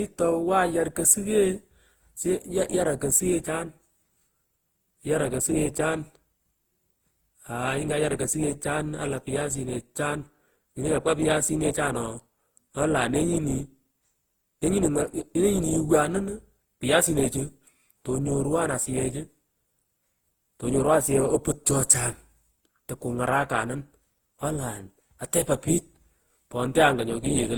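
Throughout the speech there is generation loss: the audio was likely decoded and re-encoded around ten times, which fits Opus at 48 kbit/s. Each pass requantises on a shifted frame grid, so noise and spectral holes build up. The sound turns swirly, smeared and hollow, with blurred attacks.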